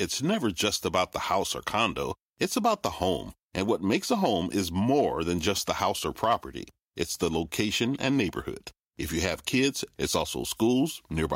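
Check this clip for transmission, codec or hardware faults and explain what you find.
No faults found anywhere in this speech recording.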